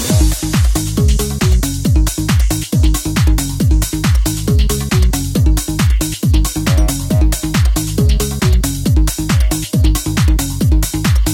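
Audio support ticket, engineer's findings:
No faults found on this one, nothing in it gives the transport, device or processing chain anything to answer for.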